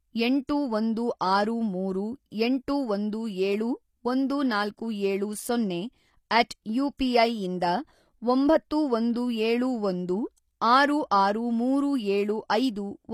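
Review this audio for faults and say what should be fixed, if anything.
Throughout, likely HE-AAC compression at around 24 kbps. Replicated treble makes s sounds gritty, and the spectrogram shows repeated, blocky upper bands ending sharply at 15 kHz.

Pre-echo at 0.47 s, just before "ಒಂದು ಆರು ಮೂರು ಎಂಟು". Block-spread quantisation noise leaks ahead of the attack, visible as a 19 ms haze preceding the waveform onset.

To prevent both, encode at a higher bitrate with full-band AAC or a lossless format, and use an encoder that switches to short blocks on transients.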